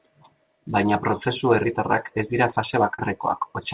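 Right after "prozesu herritarrak ez dira", from 2.94 to 3.00 s, there's a short concealed packet loss. About 40 ms of the call arrived too late for the decoder, so the receiver stretched the preceding sound across the gap and blended back in, leaving a brief smeared wobble. The band stops at 4 kHz, which fits a narrowband call codec like G.711.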